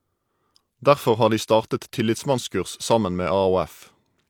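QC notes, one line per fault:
No faults heard.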